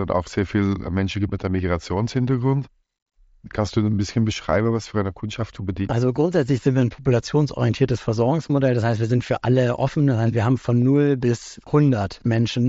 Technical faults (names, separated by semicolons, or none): concealed Bluetooth headset packet loss